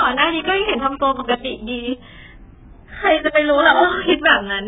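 AAC compression throughout: the speech stops dead above 3.7 kHz and sounds dull, smeared and warbling, likely from AAC-LC starved at a bitrate around 8 kbps.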